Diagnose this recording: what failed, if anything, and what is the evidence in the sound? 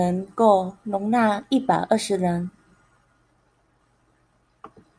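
Nothing failed: the speech carries no audible dropouts, clicks, clipping, pitch or timing errors, or other artefacts that would point to a failure at any stage of the chain.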